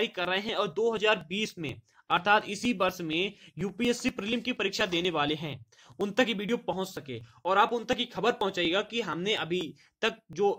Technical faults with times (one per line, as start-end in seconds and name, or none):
0.25-10.33 periodic USB or driver dropouts